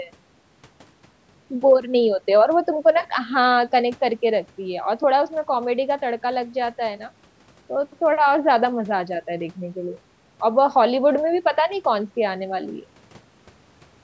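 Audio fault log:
Nothing stood out on listening to this speech recording, which has gone through a call's microphone processing with no content above 8 kHz.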